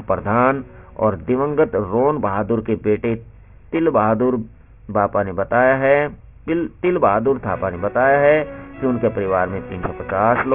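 Aliasing runs throughout. Content above 3 kHz was not filtered before downsampling, so it folds back as gritty, metallic tones, consistent with a 6 kHz rate.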